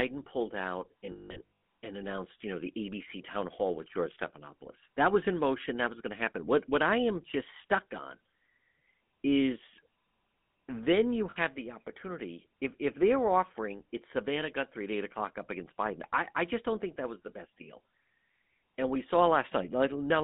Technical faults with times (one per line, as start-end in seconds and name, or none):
0.00-20.23 GSM full-rate codec
1.06-1.51 lost GSM frames
11.30-11.37 lost GSM frames